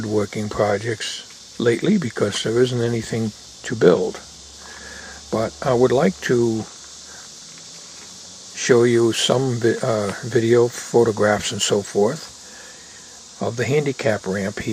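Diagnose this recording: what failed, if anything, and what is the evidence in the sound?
Nothing in the recording points to a failure at any stage of the chain. No audible event marks a fault from the wiring through to playback, so there is nothing here to diagnose.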